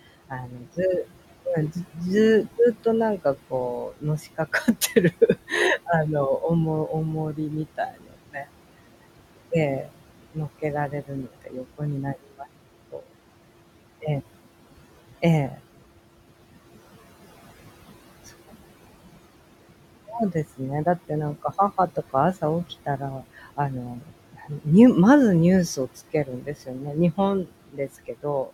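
Noise suppressor artifacts run throughout. Steady room noise is pushed down about 17 dB frame by frame, so it sinks between words and rises under them.

Speech cut by the noise suppressor occurs at 0.3–0.78 s, 2.58–8.52 s, 9.84–13.08 s, 20.08–24.66 s and 25.76–28.5 s. Quiet speech taken for noise drops by up to about 19 dB, so it sounds swallowed or faint.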